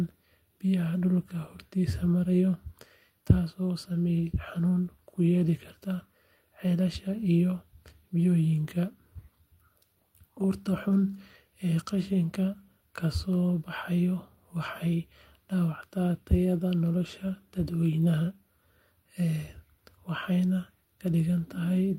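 A speech recording, with nothing technically wrong to report.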